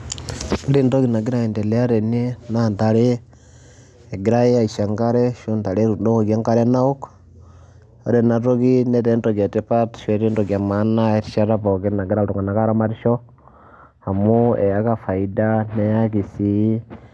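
No technical faults are audible.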